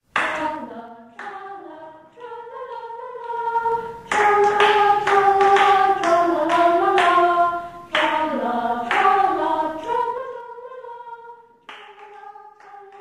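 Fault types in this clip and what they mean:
Zipper noise: The level moves in 3 dB jumps instead of gliding, and each jump clicks. Here it happens three times, near 0.4, 3.2 and 9.9 seconds. Each time the level shifts by about 20 dB, with a rapid ticking that lasts about half a second.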